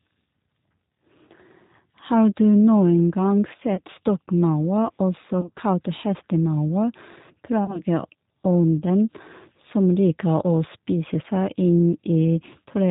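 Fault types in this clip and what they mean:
G.729 codec: The speech passes through a low-rate VoIP codec, and the damage is plainly audible. Nothing above 4 kHz survives. The voice is rebuilt from a filter and a few pulses per frame. It sounds narrow, rough and slightly synthetic, which points to 8 kbit/s.
VoIP packet loss concealed by the speech codec: Packets drop out at 3.75 s, before "stokkmaur også kalt", then scattered from 5.41 to 5.60 s after "stokkmaur også", and from 7.65 to 7.82 s. The decoder stretches its last sound into a fading buzzy tone or coloured noise. The voice stays weak briefly afterwards.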